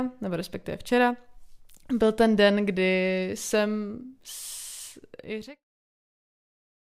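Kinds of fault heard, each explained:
No faults are audible in the speech, and the only level change is a gradual editorial fade-out from about 5 s to 5.65 s that ends without a click or hard edge.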